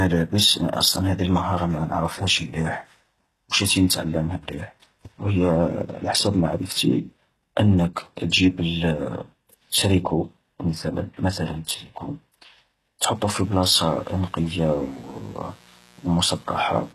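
Throughout, the speech has gritty, lispy sibilants and a synthetic-sounding treble, likely from HE-AAC compression at a very low bitrate, around 16 kbps. A spectrogram shows copied high bands ending sharply at 12.4 kHz. From 13.13 s to the end, a steady raspy mains buzz sits well below the speech, appearing as evenly spaced horizontal lines at 60 Hz harmonics.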